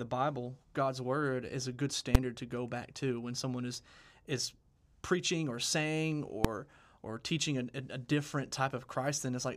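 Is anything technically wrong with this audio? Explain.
Yes. The speech is hit by two sharp, very loud bangs: at 2.15 s, after "word is a good", and at 6.45 s, after "is preaching or saying". Both are invalid numbers at full scale. A calculation produced infinite or invalid values that were pinned to maximum output for one short block, about 5.8 ms, which fits a 256-sample block, and about 1.45 ms, which fits a 64-sample block.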